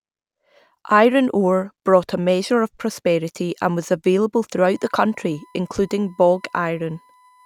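At 4.74 s, after "prosperity and was available", USB whine starts: 1 ms bus frames leak in as a faint 1 kHz tone, a flat spectrogram line.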